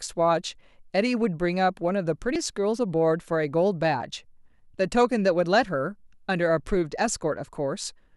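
At about 2.33 s the speech is broken by a short glitch lasting roughly 30 ms, until about 2.36 s, before the audio carries on. This is damaged data in a compressed stream: some of the encoded file at that point was wrong, so the decoder misread or rejected those frames, lost its place in the bitstream and had to hunt for the next valid frame header.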